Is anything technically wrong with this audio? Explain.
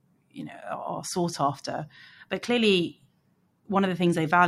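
No, nothing is technically wrong with this audio.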